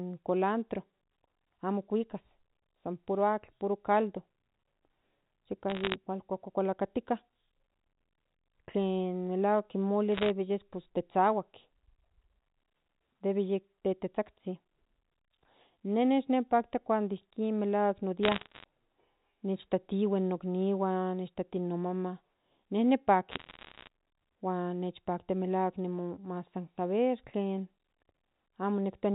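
Bit errors on a digital phone line crackle at 5.70–5.95, 10.15–10.30, 18.23–18.64 and 23.31–23.88 s. Flipped bits corrupt single A-law samples, producing sharp ticks over the band-limited telephone speech.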